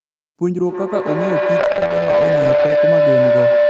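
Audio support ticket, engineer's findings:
Feedback howl, 0.62 s to end of clip. Tone near 500 Hz builds instead of decaying, loop repeating roughly every 150 ms, peaking about 7 dB above speech. Probable component: two endpoints sharing a room, with mic-to-speaker loop gain above unity. Continues to end of clip.

Call bitrate drop, 1.61 to 2.85 s. Speech turns rough and watery, lowest quality for 1.17 s. Sound points to the encoder falling from around 32 kbps to around 10 kbps after the bandwidth estimate dropped, so Opus coded more coarsely. Recovers afterwards.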